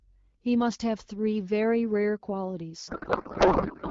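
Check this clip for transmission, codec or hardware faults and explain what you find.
One transmission fault is present. From 2.87 s to the end, the speech gives way to garbled noise and warble that barely tracks it. This is a codec payload misread. The decoder takes valid-looking AMR-WB frames but finds the fields in the wrong places, which fits octet-aligned packing being read as bandwidth-efficient. Before that point the speech carries light AMR-WB coding, consistent with 12.65 kbit/s.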